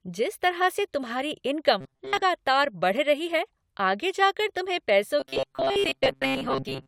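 Speech that twice turns into a rigid metallic buzz near 134 Hz, from 1.81 to 2.22 s after "जिस तरह से तुम्हारी" and from 5.20 to 6.87 s after "आगे जाकर तुम्हें पैसों". This is robotic sound from repeated short buffers, likely caused by a roughly 7.5 ms stretch being looped in place of most of the real audio.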